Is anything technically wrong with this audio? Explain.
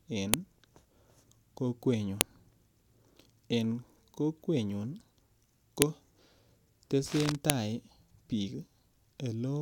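Yes, there's file header played as audio: sharp, loud clicks at 0.34, 2.21, 5.82 and 7.50 s, where joined WAV pieces kept their header bytes, which play back as samples.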